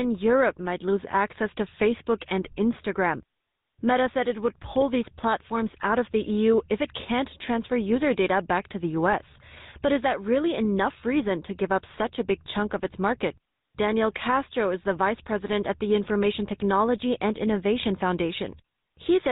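From start to finish, the speech carries the signature of the GSM full-rate codec, plainly audible across the whole clip. The codec rebuilds speech from a vocal-tract filter excited by a sparse, regularly spaced pulse train, so the voice takes on a buzzy, gravelly roughness. Nothing survives above 4 kHz, leaving it muffled and telephone-narrow. The degree of damage fits the original 13 kbps GSM full-rate coding.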